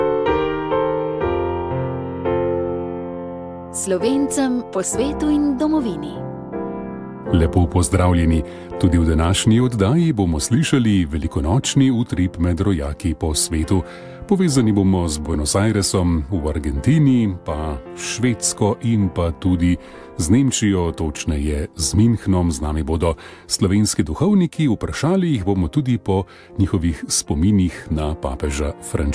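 Nothing in this one trips the ear as a technical fault, so there's simply nothing to flag here.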